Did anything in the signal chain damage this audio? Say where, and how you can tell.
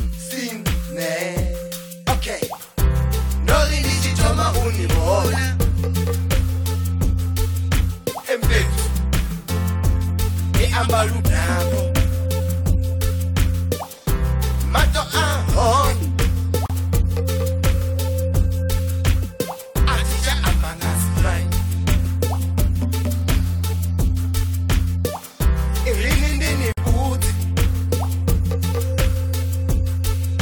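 Yes. The audio was encoded in separate pieces and then joined without trimming, which leaves a gap at a join of encoded pieces. Each encoder pass kept its start-up delay and end padding. There is a hole of about 37 ms from 16.66 to 16.70 s and another of about 52 ms from 26.72 to 26.77 s. Continuous sound drops to silence with smeared edges, then resumes exactly where it stopped.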